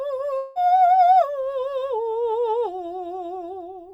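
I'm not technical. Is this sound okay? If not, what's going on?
No. At 0.37 seconds the music briefly breaks up, and it recovers at 0.58 seconds. This is a long network dropout. The audio likely stopped arriving over the connection for about a fifth of a second. To hide the gap, the player kept stretching out the last bit of sound it had, which comes through as a short, fading buzz. When the music returns, that small piece of it is missing.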